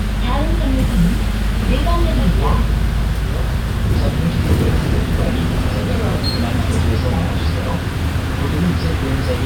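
No technical faults can be heard anywhere in this recording of sounds.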